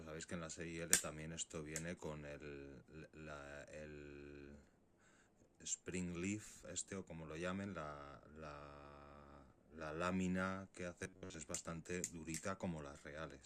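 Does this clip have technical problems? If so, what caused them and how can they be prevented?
Yes. From 11.03 to 11.34 s the sound becomes a rigid, metallic buzz at 93.8 Hz. This is robotic sound from repeated short buffers, likely because audio arrived too seldom and a chunk of about 10.7 ms looped over most of that stretch. Unlike a dropout, it never goes silent. Larger, steadier buffering prevents it.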